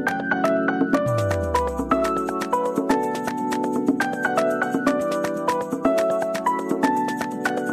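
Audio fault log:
No fault can be heard anywhere in this audio. There is nothing to enter in this log.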